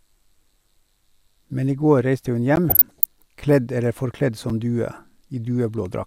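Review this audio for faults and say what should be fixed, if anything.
The output buffer likely went unfilled at 2.56 s (14 ms) and 4.50 s (6 ms, fitting a 256-sample buffer), leaving blocks of digital silence heard as ticks or dips in the speech. Enlarging the buffer or raising the audio thread's priority would prevent these dropouts.

From 2.69 to 3.05 s, weak DAB reception let bit errors, roughly a third of a percent, slip past error correction, so wrong samples put short blips of noise in single sub-bands: DAB burbling, heard as blips of noise over the speech. A better antenna, a stronger multiplex or a clean source would prevent it.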